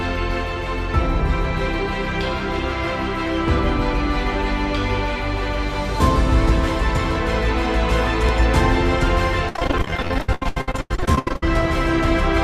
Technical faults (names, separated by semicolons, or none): overlapping chunks; repeated packet loss (robotic sound)